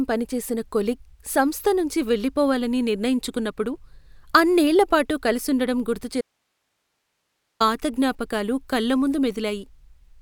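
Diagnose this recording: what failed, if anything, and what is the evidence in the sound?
Audio dropout to a faint residue, 6.21–7.60 s, after "అన్నేళ్ళ పాటు కలుసుండటం": speech cuts abruptly to hiss far below the signal, likely an interrupted analogue connection into a still-live input.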